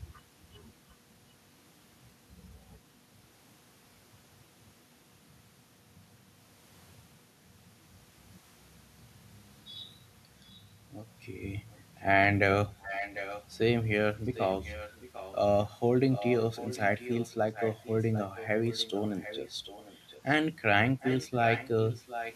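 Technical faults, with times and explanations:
12.79–13.46 s, 14.34–15.35 s, 16.11–20.35 s and 21.0–22.34 s: echo leak. A fainter copy of the speech returns about 0.75 s late, roughly 10 to 15 dB below it. The likely cause is a far-end loudspeaker whose echo canceller let some of the microphone's pickup back into the call.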